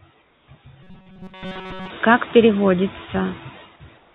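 Noise suppressor artifacts run through the whole clip: frame by frame, the bands judged to be steady noise are pulled down by about 12 dB. The background sinks in the gaps and swells back under the speech.

Comfort noise in place of the background appears from 0.22 to 0.48 s. For those 260 ms the real background gives way to a smooth, featureless hiss about 3 dB quieter, likely because the sender stopped transmitting during the pause and the receiver filled it with synthetic noise.

Robotic sound from repeated short buffers follows from 0.83 to 1.90 s. The likely cause is audio arriving too seldom, so the player loops a tiny slice while the real signal is skipped. Nearly the whole stretch is repeated, imposing a rigid 188 Hz metallic buzz, which fits a buffer of roughly 5.3 ms.

Comfort noise in place of the background returns from 3.98 s to the end, replacing the last 170 ms with the same flat, slightly quieter hiss. 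Throughout, the narrowband codec leaves nothing above 4 kHz.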